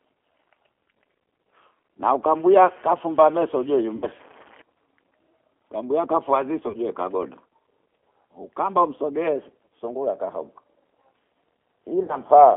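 Speech carried through the G.729 codec at 8 kbit/s, confined to a 300 to 3400 Hz line band. The codec rebuilds each frame from a vocal-tract filter, pitch predictor and sparse pulses, so the voice sounds plainly rough and synthetic throughout. VoIP packet loss concealed by the speech codec occurs at 3.96 to 4.08 s, at 6.68 to 6.77 s just after "kambua afua ziso", and at 12.03 to 12.17 s. About 60 ms, 30 ms and 60 ms of audio are missing, which fits two, one and two lost packets. At each gap the decoder extends its last pitch and filter into a fading buzzy tone or coloured noise, and the voice stays weak or distorted briefly after audio resumes.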